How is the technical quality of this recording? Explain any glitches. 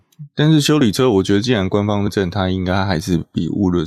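The speech has two glitches, both compressed frames skipped. At 0.8 s a few milliseconds of audio vanish, and at 2.06 s around 150 ms goes missing. Whole compressed frames were lost or rejected as damaged. The sound jumps forward at each join.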